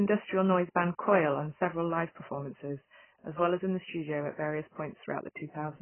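Throughout the speech there is nothing above about 3.1 kHz, leaving it dull and smeared, with a warbling, fizzy texture on sustained sounds and sibilants. The likely cause is heavy AAC compression, where a very low bitrate, fitting roughly 12 kbps, forces a low cut-off and coarse quantisation.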